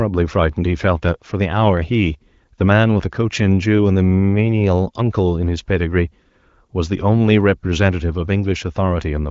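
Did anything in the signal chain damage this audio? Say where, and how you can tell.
No, nothing in the chain audibly damaged this speech. It has the narrowed top end of the AMR wideband (HD Voice) codec, with nothing above 7.5 kHz, and its clarity points to one of the higher AMR-WB rates, such as 18.25 kbit/s.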